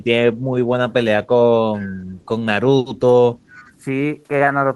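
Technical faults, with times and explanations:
3.39–3.81 s, echo leak: a far-end echo canceller likely missed its loudspeaker pickup, so a faint copy of the speech returns 0.41 s late, roughly 30 dB down.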